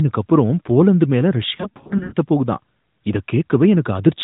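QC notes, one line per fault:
1.56 to 2.14 s, lost AMR speech frames: about 260 ms of frames dropped, scattered across 560 ms in runs of up to 80 ms, so the decoder repeats the last good pitch and vocal tract settings with falling gain. The result is brief drawn-out warbles and dips, never a hard gap or click, which is what separates this from plain dropouts.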